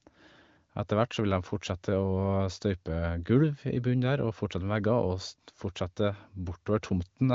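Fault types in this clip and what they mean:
Nothing stood out on listening to this speech.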